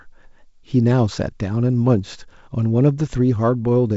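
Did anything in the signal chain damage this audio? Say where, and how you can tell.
No, nothing in the chain damaged this speech. It has been through G.722 wideband telephone coding, which leaves nothing above about 7.7 kHz and a light coding texture whose slightly noisier lower band fits the 56 kbit/s mode.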